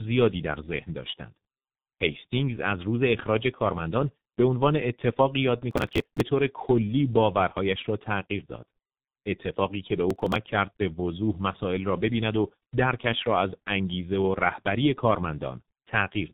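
Speech heard through tandem speech coding throughout: two low-rate speech codecs in series leave it rough, muffled and warbly, with nothing above 3.8 kHz, a compounded degradation beyond what a single codec's band-limiting causes. Processor overload crackle appears at 5.71–6.21 s and 10.11–10.36 s, gritty tearing from skipped buffers (consistent with roughly 5 ms buffers) that stops once the load passes, unlike steady codec distortion.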